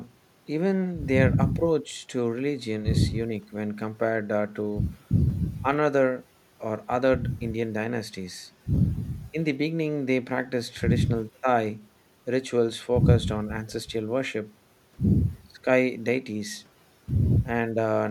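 No technical faults can be heard anywhere in the recording.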